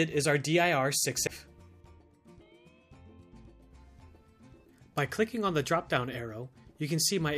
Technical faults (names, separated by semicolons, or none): CD skip